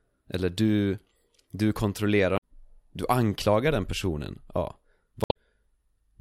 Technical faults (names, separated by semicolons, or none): damaged data in a compressed stream